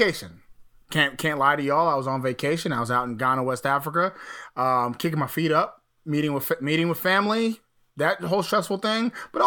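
Nothing in this recording stands out as a technical fault, so there's simply nothing to flag along the way.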